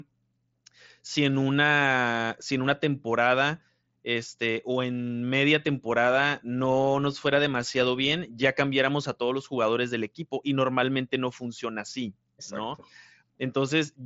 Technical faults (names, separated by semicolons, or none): none